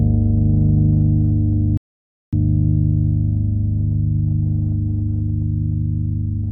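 At 1.77 s the audio drops into silence. It stays silent until 2.33 s. This is a rebuffering stall. The player used up the audio it had downloaded and had to wait for more data. Playback then picks up at the exact point where it stopped. No sound is skipped or repeated. The gap simply adds about 0.55 s to the running time. It is a clean, dead pause, not a fade.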